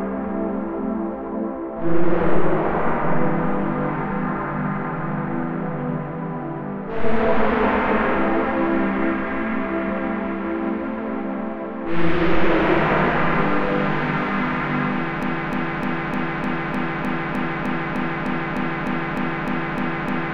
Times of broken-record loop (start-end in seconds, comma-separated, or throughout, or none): 15.23-20.33